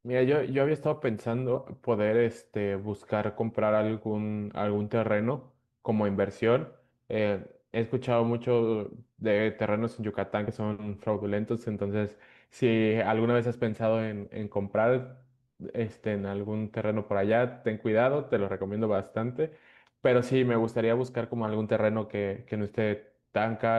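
It's a speech clip, and at about 10.47 s a couple of compressed frames get skipped. The audio jumps ahead by around 40 ms, which fits a couple of 20 ms frames lost or rejected by the decoder.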